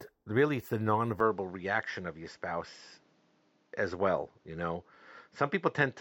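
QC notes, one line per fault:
1.20–6.00 s, input switched to a poorer device: from 1.20 s to the end the speech turns duller and boxy, with nothing above 7.6 kHz, a new faint background noise far below the speech, and no change in loudness. There is no gap at the change. The likely cause is the recording input moving to a different, narrower-band microphone or headset path, which brings its own tone colouring and noise floor.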